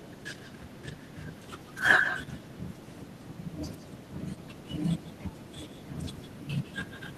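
Echo with no canceller throughout: the far-end loudspeaker feeds its microphone, so each phrase returns roughly 150 ms later, about 5 dB quieter and thinner.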